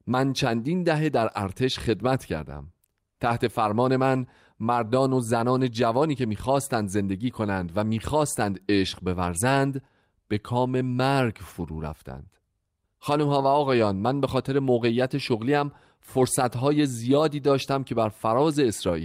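At 5.57 s there's a brief lost packet rebuilt from error correction: the decoder played the next packet's low-bitrate copy, so twenty milliseconds of speech turn rough and noisy instead of dropping out.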